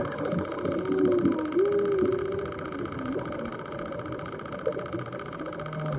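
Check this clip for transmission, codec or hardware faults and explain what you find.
No transmission, codec or hardware faults can be heard here.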